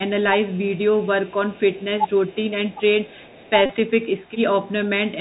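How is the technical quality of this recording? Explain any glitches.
The recording has clear technical problems: narrowband headset coding throughout, faint repeated echoes, one brief dip in the speech, and a short buzzing dropout.

Bluetooth CVSD headset codec, throughout: the one-bit delta coding at 64 kbps removes everything above 4 kHz, leaving scratchy sibilants and a granular hiss under the speech.

Echo leak, at 0.51–0.79 s, 1.23–1.85 s, 2.07–2.36 s, 2.70–2.80 s and 3.07–3.50 s: a very faint copy of the speech returns 384 ms late, likely from a far-end loudspeaker escaping its echo canceller.

Speech suppressed in double talk, 3.27–3.34 s: the speech dips by roughly 10 dB for about 70 ms, likely an echo canceller turning down both talkers while they overlap.

Bluetooth headset packet repeated, 3.66–3.71 s: about 37.5 ms of lost audio, which fits ten 3.75 ms packets, was filled by replaying old data, producing a steady buzz near 267 Hz.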